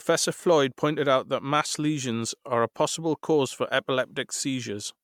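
A speech clip with generation loss throughout: the voice sounds swirly, hollow and smeared, with softened consonant attacks, most likely from around seven successive MP3 re-encodes at what sounds like 128 kbit/s. A spectrogram would show ragged spectral holes and blurred onsets.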